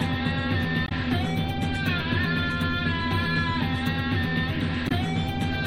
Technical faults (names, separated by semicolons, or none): damaged data in a compressed stream